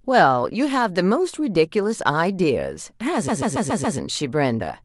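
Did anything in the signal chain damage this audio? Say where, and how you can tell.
Yes. From 3.27 s to 3.97 s the speech stutters: a chunk about 139 ms long is played six times in a row, so the same fraction of a second loops before the audio moves on, making the clip about 0.7 s longer. These are repeated frames, damage at the storage or network stage. A short run of compressed frames, consistent with a handful of codec frames, was written or delivered more than once, and the decoder played each copy in turn.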